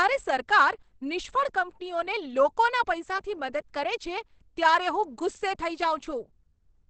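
Throughout the speech the sound is muffled and hoarse, with plainly audible damage and nothing above about 8.5 kHz. The likely cause is Opus compression in its speech (SILK) mode, which fits a bitrate near 16 kbps.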